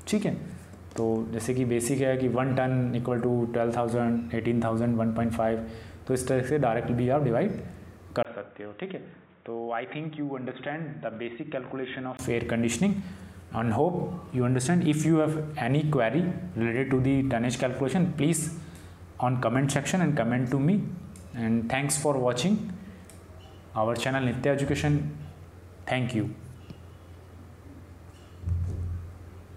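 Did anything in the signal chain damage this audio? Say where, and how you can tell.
Yes. From 8.23 to 12.19 s the input switched to a poorer device, likely a second microphone selected at driver level. After a 20 ms gap, the spectrogram goes blank above 3.8 kHz, the waveform shrinks by roughly 10 dB, and a new noise floor appears some 35 dB down.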